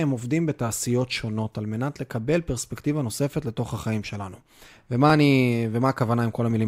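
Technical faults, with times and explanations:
0.86 to 6.51 s, clock drift buffer slips: about five regular clicks every 1.41 s, likely from two device clocks roughly 200 ppm apart, forcing small sample blocks to be dropped or repeated.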